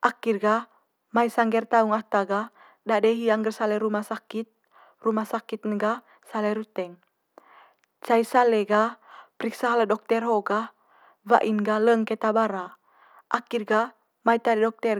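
No technical faults can be heard in the recording at any point.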